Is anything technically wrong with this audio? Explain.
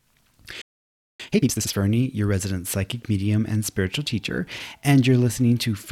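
Yes, there are two related faults in this speech clip.

From 0.61 s to 1.20 s there is a playback stall. The speech stops mid-flow and the output falls silent for about 580 ms before the sound resumes. The likely cause is the player's buffer running dry or its playback thread being blocked, so nothing reached the output until data flowed again. It registers as an abrupt dropout rather than a fade or a natural pause.

From 1.20 s to 1.76 s, just before "your resident psychic medium", there is time-compressed catch-up. To clear the backlog built up during the stall, the player drops short segments and cross-fades the remainder, playing the material at about 2x speed. Pitch stays normal, but the speech sounds rushed until normal pacing returns.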